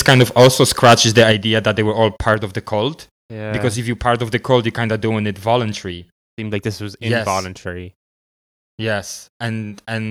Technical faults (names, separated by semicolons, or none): microphone overload; microphone volume stepped down